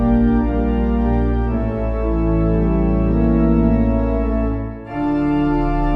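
No technical faults can be heard in the audio. There is nothing to place in time and no cause to trace.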